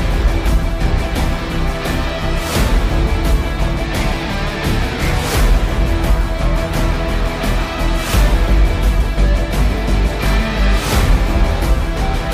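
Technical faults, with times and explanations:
Nothing stood out on listening.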